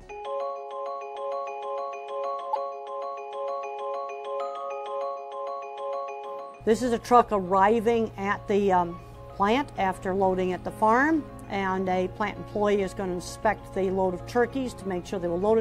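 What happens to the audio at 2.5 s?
At 2.50 to 2.56 s, roughly 66 ms, the audio shows damaged data in a compressed stream. A short run of the encoded bytes there is corrupted, so the decoder cannot parse those frames correctly, loses its place in the stream and has to hunt for the next valid frame header before it can resume. During that gap the sound breaks into a brief chirp, squawk, click or short hole before normal playback returns.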